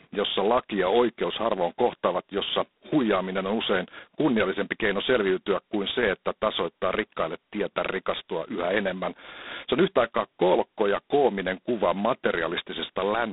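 From start to finish the speech carries heavy G.726 ADPCM damage. The codec sends only the difference between each sample and an adaptive prediction, and here so few bits per sample survive that the coarse quantising leaves a harsh, rasping hiss that rises and falls with the speech level, which fits the 16 kbit/s mode. The band is narrowed to a telephone line of roughly 200 Hz to 3.7 kHz, with nothing above 3.8 kHz.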